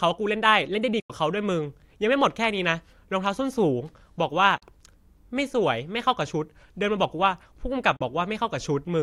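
Bluetooth dropouts, likely, cut this speech clip at 1.00 to 1.10 s, 4.58 to 4.62 s and 7.96 to 8.01 s. Each is a sudden hole of silence, about 93 ms for the first (consistent with roughly five packets) and 37 ms for the other two. Packets missed their deadline to the headphones and were discarded, so playback resumes further along, as if the sound had continued through the gap.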